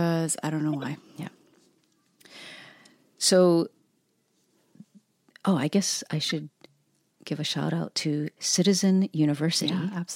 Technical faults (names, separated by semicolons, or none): corrupt frame decoded